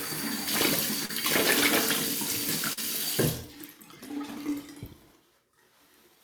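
Brief smears at 1.05–1.11 s and 2.73–2.79 s are short concealed packet loss: about 40 ms of audio arrived too late, and the receiver extended the preceding sound to cover each gap.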